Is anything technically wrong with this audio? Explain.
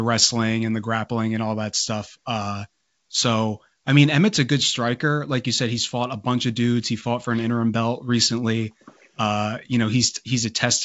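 No, nothing is technically wrong with this audio.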